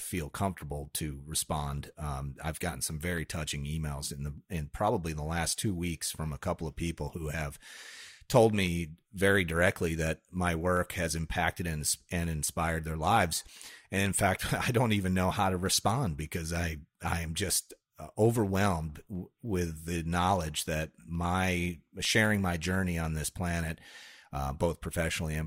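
From 0.08 s to 25.35 s, periodic USB or driver dropouts skip a tiny slice of audio, well under a millisecond, every 0.1 s. They produce steady ticks, ten per second, during speech. A spectrogram shows evenly spaced thin vertical broadband lines, and the waveform shows small step discontinuities.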